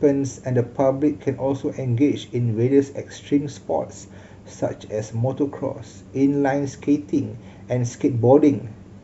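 At 4.02 s there's damaged data in the compressed stream: corrupted bytes throw the decoder off sync, and the speech gets a brief blip.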